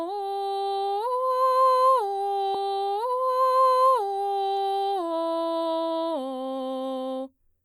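At 2.54 s the music jumps back and replays about 1.98 s of material until 4.53 s, a stream segment repeated because the player queued one chunk twice. A spectrogram shows an identical block twice, with a sharp vertical seam at the jump.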